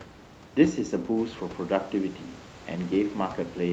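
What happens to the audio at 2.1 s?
Nothing goes wrong at 2.1 s: the speech continues intact through that moment, with no dropout, glitch or distortion.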